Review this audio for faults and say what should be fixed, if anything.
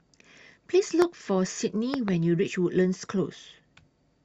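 There are two loud pop faults. The first is a single sharp pop from 1.02 to 1.04 s. The second, from 1.94 to 2.10 s, is a pair of pops in quick succession. Both peak at about 15 dB above the speech, which continues underneath. The likely cause is a sudden voltage step from a plug, switch, static discharge or driver glitch, which the following circuits shape into a thump. To prevent it, secure connections and avoid switching during recording.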